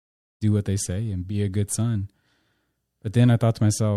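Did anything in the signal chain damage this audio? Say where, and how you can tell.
No, nothing in the signal chain has damaged this speech. The smooth fade in at the start, over roughly the first half-second, rises gradually with no click or hard edge, as an editor would shape it.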